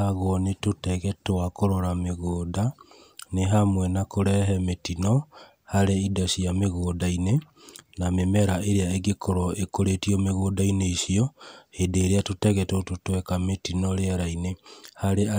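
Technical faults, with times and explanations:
Nothing stood out on listening to this speech recording.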